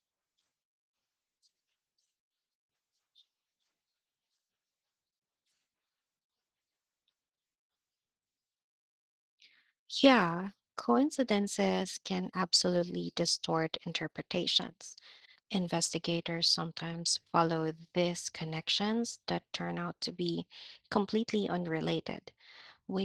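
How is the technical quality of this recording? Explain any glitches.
The technical quality is limited by plainly audible Opus voice compression throughout the whole clip. The coder appears to use hybrid mode. The speech below 8 kHz is modelled by linear prediction with a coarse excitation, so it sounds slightly hoarse and robotic. Above 8 kHz, a thin transform layer rebuilds only a rough energy outline. This degree of damage fits a low bitrate around 16 kbps with 20 ms frames. On a spectrogram, the region above 8 kHz would look patchy and blocky rather than finely detailed, with changes stepping at roughly 20 ms intervals.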